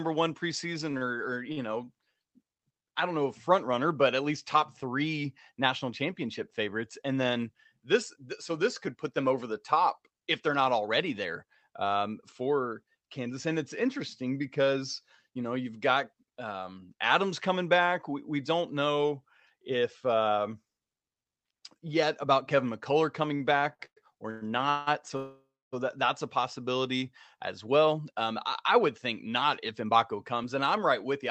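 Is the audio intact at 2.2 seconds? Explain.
No. 2.2 s falls inside repeated stalls (stutter), 0.91 to 2.25 s. Late packets emptied the jitter buffer four times, and the last sound was stretched over each gap (up to 45 ms). Nothing is lost, but the audio drags; a spectrogram shows brief frozen, smeared stretches.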